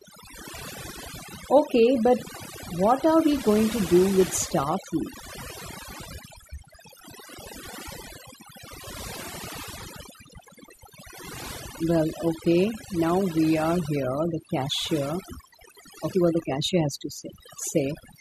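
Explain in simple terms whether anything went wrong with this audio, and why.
Two things went wrong. The first runs through the whole clip: overdone noise removal. A cleanup tool that strips out background hiss was turned up too far, so it also cut away the quieter parts of the speech. The background drops and breaks up into twinkling specks. Ordinary hiss would sound like a steady, even layer behind the voice. Here the background has been hollowed out, and the quiet parts of the voice have gone with it.

The second is damaged data in a compressed stream, heard three times, at 5.52, 11.58 and 16.13 seconds. Each time, a small piece of the compressed file was corrupted. The player could not read that piece, lost its place, and skipped ahead to the next readable part. That produces a tiny chirp or blip lasting a split second. A click from a bad cable or a scratch would not skip any sound, and a network dropout would leave a longer gap.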